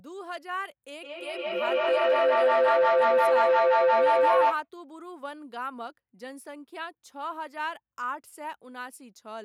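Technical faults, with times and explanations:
1.0–4.69 s, feedback howl: a shared-room loop between microphone and loudspeaker adds level on every pass, so each repeat returns louder and narrower until a tone around 500 Hz takes over, peaking about 12 dB above the speech, with repeats roughly every 150 ms at the loop's delay. A spectrogram shows a bright horizontal band near 500 Hz thickening over time, and the waveform swells steadily in amplitude until the howl stops at 4.69 s.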